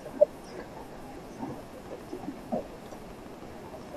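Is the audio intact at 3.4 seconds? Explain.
No. At 3.4 seconds the speech sits inside a train of clicks that runs from 1.63 s to the end of the clip. Sharp pulses arrive at a steady 12.8 per second, about thirty in all. Each click has much the same shape, and they peak at roughly the level of the speech itself. They are heard as an even ticking over the talking and through the pauses. The likely cause is electrical interference or a faulty connection or power supply.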